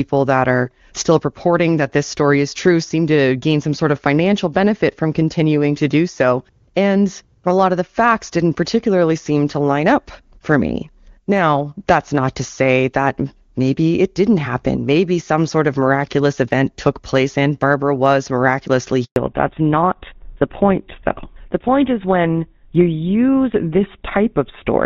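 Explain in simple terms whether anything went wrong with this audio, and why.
Right after "was miraculously", at 19.04 to 19.16 s, there is a handover gap. The call switched networks, and about 120 ms of speech went missing as silence.

From 19.16 s to the end, a fallback to narrowband follows. The call left the clearer HD Voice codec for an older phone codec, so nothing above 4 kHz remains and the speech sounds duller.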